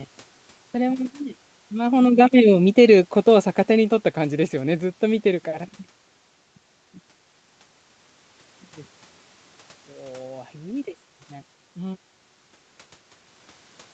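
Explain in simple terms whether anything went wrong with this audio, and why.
The call's automatic gain falling was the problem. From 1.73 s to 4.0 s, the automatic volume control judged the incoming sound too loud or too noisy and turned itself down step by step, as if someone were slowly easing a volume knob. You hear the speech start loud and then sink over those two seconds, and the room's background noise sinks with it. Around 2 s the talker also seems to shift position at the microphone, which is not a system fault.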